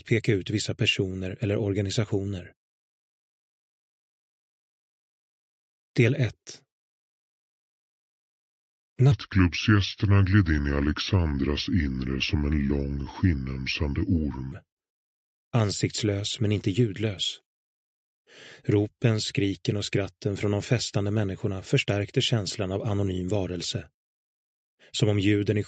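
From 9.12 to 14.52 s, a section at the wrong speed plays at 0.75x, likely from a clock mismatch. The sound drags and drops about five semitones.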